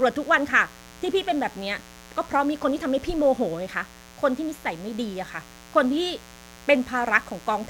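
From the first moment to the end, a mains buzz sits under the speech: a steady, raspy drone tied to a 60 Hz supply. Something like a dimmer, a rectifier or an unshielded lead is letting sharp switching spikes in twice per cycle, so the interference stacks up harmonics of 60 Hz reaching several kilohertz. That gives it a gritty edge, not a smooth hum, at about 25 dB below the speech.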